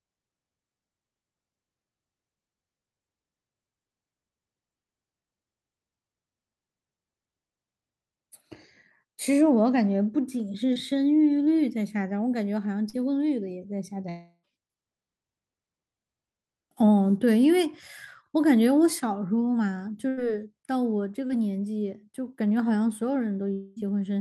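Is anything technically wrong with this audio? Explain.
Yes, the speech has three kinds of packet-loss damage.

Short concealed packet loss at 10.73–10.77 s, 12.89–12.95 s and 21.27–21.31 s: about 20, 40 and 20 ms never arrived, so the decoder extrapolated the preceding sound, leaving brief smears or wobbles.

A burst of packet loss at 20.09–20.19 s: roughly 80 ms went missing in a row, and the concealment held the last sound as a buzz or hiss that fades before the speech resumes further on.

A long network dropout at 14.09–14.45 s and again at 23.53–23.78 s, likely caused by the stream stalling: about 340 ms and 240 ms were replaced by a decaying continuation, with a short silence near the end of the first gap. The speech then picks up past the lost section.

All of this rides on an Opus call path whose coding caps the audio around 12 kHz.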